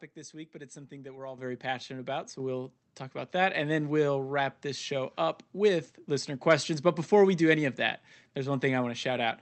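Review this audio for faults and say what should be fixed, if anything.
The microphone volume steps up twice, at 1.38 s by about 9 dB and again at 2.4 s by about 4 dB. The call software's input gain control is bumping the device volume in single jumps, so the voice and the background noise both get abruptly louder together. To prevent it, turn off automatic microphone gain adjustment and set a fixed input level.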